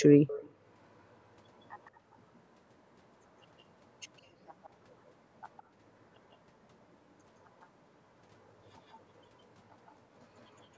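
An echo leak, likely from an echo canceller on a loudspeaker end passing residue back, puts a faint copy of the speech 163 ms late over 0 to 0.51 s, with fainter brief scraps at 1.85, 4.64, 5.57, 7.61, 8.9, 9.86 and 10.38 s.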